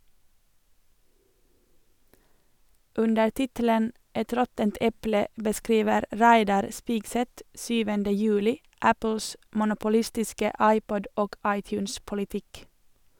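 No technical faults can be heard in this speech recording.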